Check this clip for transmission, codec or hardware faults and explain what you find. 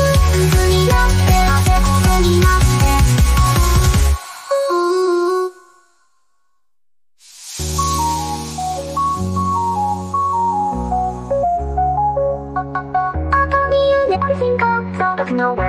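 Two short faults from damaged data in a compressed stream, at 11.43–11.45 s and 14.14–14.17 s. Corrupted bytes make the decoder misread frames and resync, producing a brief blip or chirp. On a spectrogram each appears as a thin vertical smear; the waveform shows a jagged discontinuity.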